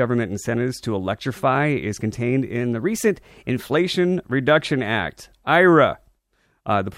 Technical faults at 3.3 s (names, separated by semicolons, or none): drift correction step